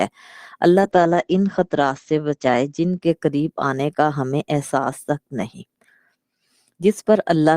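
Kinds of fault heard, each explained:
Call bitrate drop: from about 0.81 s to 3.67 s the sound turns rough and muffled, with the top end cut off at around 8 kHz instead of 20 kHz. That fits the encoder being squeezed from 32 kbps down to 11 kbps, bottoming out for about a second before recovering.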